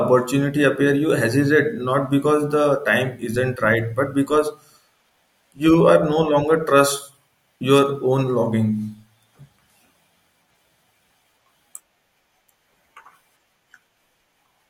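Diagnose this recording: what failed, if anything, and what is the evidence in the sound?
Nothing in this recording points to a failure at any stage of the chain. No stage from capture through to playback leaves an audible mark on the speech.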